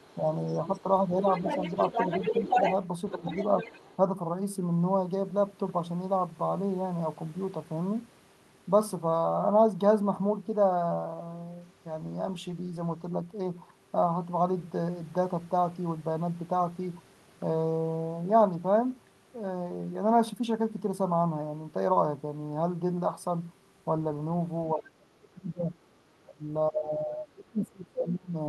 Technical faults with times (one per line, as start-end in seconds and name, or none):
0.11-3.96 other side's voice leaking through
0.81-1.50 speech suppressed in double talk
3.12-3.69 speech suppressed in double talk
24.74-28.48 speech suppressed in double talk